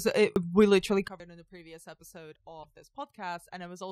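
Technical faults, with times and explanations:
0.36 s and 1.2 s, dropped buffer (overrun): the sound skips ahead, just before "we literally" and just after "it we literally". Roughly 70 ms and then about a tenth of a second are missing, likely because samples were overwritten before being collected. The waveform shows an abrupt seam with no gap, and the spectrogram a thin vertical line.
1.08 s to the end, sudden gain jump: right after "it we literally" the level falls by about 18 dB in a single step, with speech and background noise dropping together. This is likely an unramped digital gain change. The waveform envelope shrinks in one step, and the spectrogram darkens uniformly across all frequencies.
2.60 to 2.65 s, damaged data in a compressed stream: the sound is disrupted for about 56 ms as the decoder misreads corrupted frames and resynchronises. The spectrogram shows a brief disturbance unrelated to the surrounding speech.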